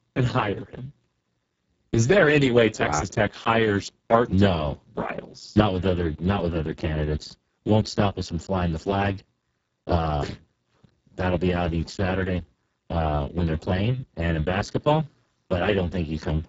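Throughout the speech, heavy Speex codec damage makes it hoarse, buzzy and near robotic, which fits a bitrate around 6 kbps. Unlike plain band-limiting, sound reaches 7.7 kHz, but above about 4 kHz it is only shaped hiss.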